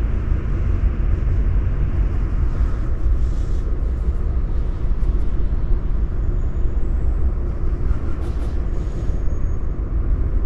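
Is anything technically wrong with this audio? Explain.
Yes. Throughout the clip there is a doubled audio track: a second, full-band copy of the sound trails the original by about a fifth of a second at roughly equal loudness, likely from the signal being captured again through a slower path. Unlike an echo or reverb, the copy has no decay, no room colour and no further repeats.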